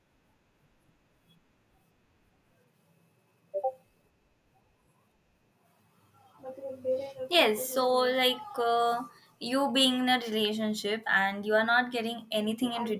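Nothing in the speech stood out as a technical fault on listening.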